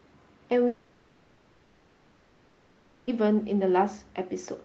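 From 0.67 s to 3.10 s the speech stops and, for about 2.4 s, is replaced by synthetic fill: a buzzy continuation of the last sound that decays into a low steady noise without ever dropping to true silence. This is a long network dropout, most likely a run of lost packets masked by the receiver's concealment. On a spectrogram, the speech harmonics smear into a fading, featureless band below the Opus call path's 8 kHz ceiling. The waveform flattens to a low, uniform envelope, and normal speech resumes at 3.10 s with the lost portion gone.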